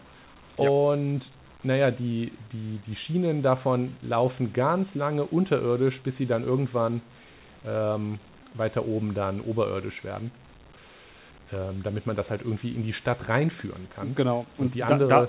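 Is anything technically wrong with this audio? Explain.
No, nothing's wrong here: it's speech that has come through a call path, and the lack of anything above 4 kHz is just what you'd expect from a G.711 A-law codec doing its normal job.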